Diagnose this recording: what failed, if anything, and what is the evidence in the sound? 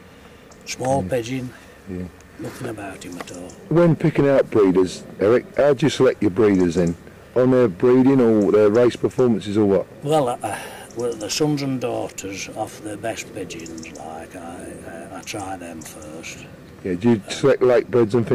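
A gain stage was driven past what it could pass, whether a converter, a number format or another stage, so the waveform peaks were cut flat: hard clipping. The overdrive runs about 3 to 5 dB, and the flattened tops add harmonics high in the spectrum, heard as distortion on loud moments at 0.90–0.96 s, 3.76–4.83 s, 5.23–6.85 s, 7.38–10.22 s, 11.42–11.45 s and 17.06–18.35 s. The longest stretch runs nearly three seconds.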